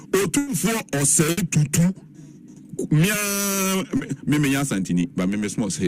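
At 0.37 to 0.49 s there is a burst of packet loss: roughly 100 ms of audio failed to arrive in time, and the receiver bridged the gap by extending the last sound while fading it down. The result is a held buzz or decaying hiss, after which the sound picks up further along with that stretch missing. The same happens at 1.31 to 1.39 s, where about 60 ms is replaced and lost.

At 3.97 to 4.01 s a short concealed packet loss occurs. About 20 ms never reached the decoder, so the receiver continued the preceding sound briefly, either from its pitch or as shaped noise, and blended back into the real signal. It is heard as a quick smear or wobble, and a brief sound at that point can drop out entirely.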